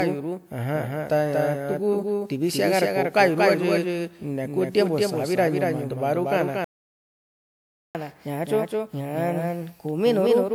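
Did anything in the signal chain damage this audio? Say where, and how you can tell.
Yes. At the capture or edit stage, a second copy of the speech likely runs throughout, about 5 dB quieter and roughly 200 ms late. That doubled audio track adds a dry, abrupt echo with no room decay.

At the codec stage, the audio was likely re-encoded about five times. The result points to repeated WMA 1 passes at 128 kbit/s. This generation loss leaves a swirly, hollow sound with blurred attacks.

At playback, a buffer or thread likely starved at 6.64 s. This playback stall cuts the speech dead for 1.3 s until 7.95 s.

Right after the stall, the player catches up at higher speed. From 7.95 s to the end it resamples at 1.1 times normal speed, raising the pitch by about 1.5 semitones.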